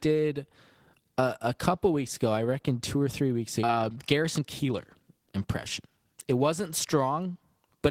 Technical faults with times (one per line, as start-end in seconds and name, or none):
3.63-3.65 skip ahead
3.73-6.39 jitter buffer speed-up